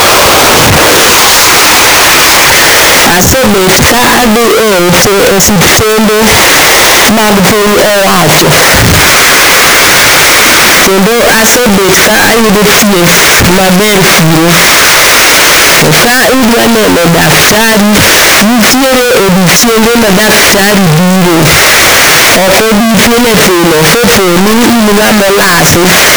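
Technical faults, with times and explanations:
Throughout, signed and unsigned mixed up: the speech comes through as a wall of loud, harsh distortion, and the quiet stretches are just as loud as everything else. That's most likely 16-bit samples being read with the wrong sign convention, so the top bit gets flipped and every time the waveform crosses zero it jumps straight across the whole range, turning even near-silence into loud noise.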